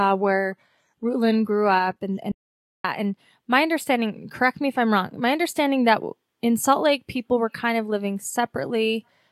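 From 0.0 to 2.0 s the speech plays as an adaptive stream starting at a low bitrate. The top end is thin and partly synthetic, with a swirly, smeared quality from heavy coding, which fits a stream opening on HE-AAC at around 20 kbit/s. At 2.0 s the player steps up to a fuller encoding, consistent with AAC-LC at 96 kbit/s. The treble fills in abruptly and the artefacts drop away, with no gap at the switch.

Shortly afterwards comes an audio dropout to silence, from 2.32 to 2.84 s. The speech stops in mid-flow and the signal falls to silence for about 0.53 s, with no room tone or background underneath. It then resumes just as abruptly. The likely cause is a momentary loss of the input, such as a link failure or an accidental mute, while the encoder kept writing empty samples. Whatever was spoken in that half second is lost.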